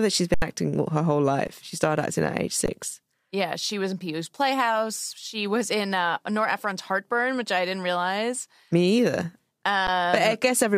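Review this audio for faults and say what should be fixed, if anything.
Underrun with held sample at 0.34–0.42 s after "that she's", 1.47 s after "her whole", 2.66–2.68 s after "started acting at age", and 9.87 s. Each time the output buffer emptied and the converter held its last value, so the waveform runs as a flat line, a blank gap on the spectrogram. The missing audio was skipped at each gap. Larger playback buffers or higher audio-thread priority would prevent it.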